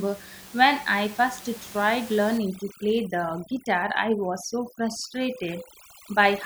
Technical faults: overdone noise removal

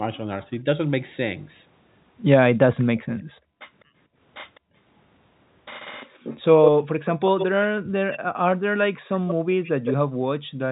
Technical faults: echo leak; background gated by the echo canceller

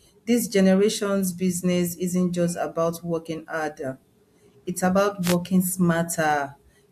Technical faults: wireless microphone noise hit

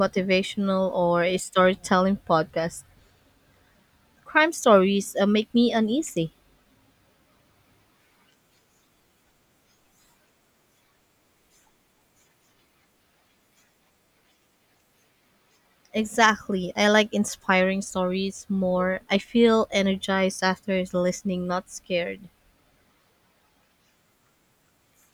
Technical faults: none

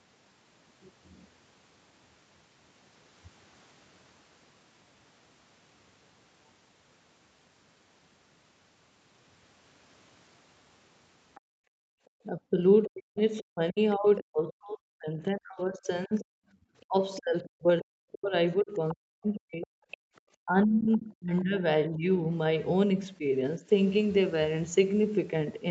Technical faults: other side's voice leaking through; background gated by the echo canceller; speech suppressed in double talk

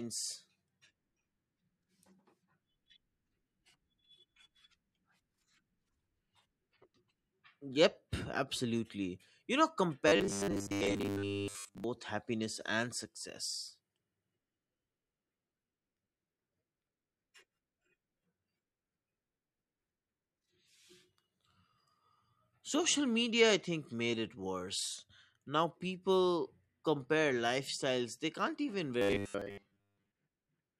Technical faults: robotic sound from repeated short buffers

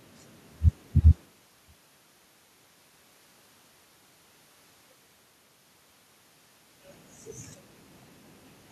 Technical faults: none

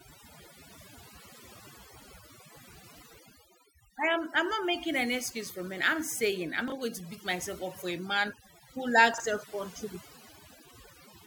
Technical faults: overdone noise removal; chunks out of order

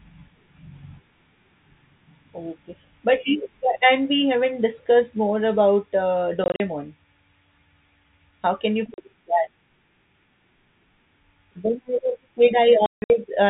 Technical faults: packet loss filled with silence

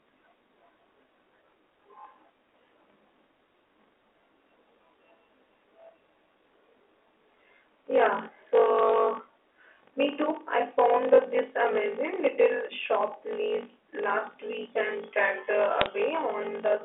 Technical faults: block size mismatch (padded); bit errors on a digital phone line

